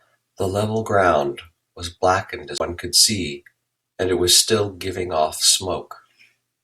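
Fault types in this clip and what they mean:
CD skip: the laser jumped off its track and landed on a different turn of the disc's spiral, so playback briefly muted and resumed from another point. At 2.58 to 2.60 s the speech drops out for roughly 20 ms, with an abrupt jump in place.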